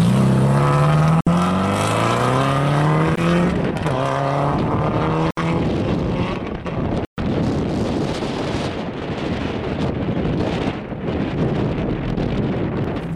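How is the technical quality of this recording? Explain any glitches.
The recording has four brief dropouts, each consistent with a Bluetooth stall. They occur at 1.21–1.29 s (about 59 ms of silence), 3.16–3.20 s (18 ms), 5.31–5.40 s (67 ms) and 7.05–7.19 s (130 ms). Each time, the sound cuts abruptly to nothing and then resumes. The likely cause is radio interference delaying packets until the headphones' buffer ran dry and playback paused for retransmission. On a waveform, each appears as a flat gap; on a spectrogram, as a clean vertical blank band across all frequencies.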